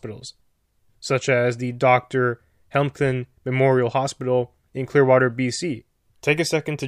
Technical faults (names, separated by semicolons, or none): none